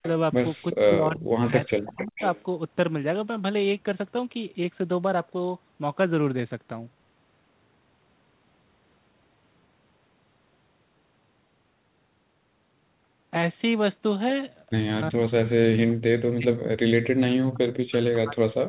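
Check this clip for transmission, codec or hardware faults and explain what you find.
Two transmission faults appear in the speech: leaking echo and speech suppression during double talk. The call path itself, narrowband G.711 mu-law with nothing above 4 kHz, sounds as that codec does.

Echo leak: the far end's echo canceller likely failed to fully remove what its microphone caught from its loudspeaker, so that residue travelled back down the line. At 0.02 to 0.08 s and again from 1.98 to 2.43 s, a faint delayed copy of the voice surfaces, lagging by 358 ms and 421 ms respectively, sitting about 15 dB below the main speech.

Speech suppressed in double talk: when both ends talked over each other, the echo canceller likely could not tell the local talker from loudspeaker echo and clamped everything down. From 0.72 to 2.22 s, 15.1 to 16.63 s, and 17.45 s to the end, the voice sinks sharply, by as much as 40 dB at its deepest, so stretches of speech nearly vanish while the other side speaks.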